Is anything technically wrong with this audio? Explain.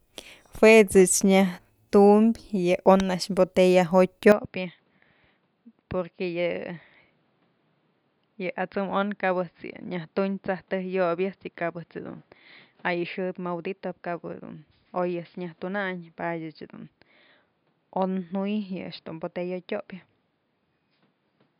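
Yes. From 4.32 s to the end, the speech turns dull and boxy, with nothing above 5 kHz, a level drop of about 10 dB and a new noise floor about 40 dB below. With no gap, this likely means the input switched to a poorer device. A mere filter or codec change would not bring new noise and level together.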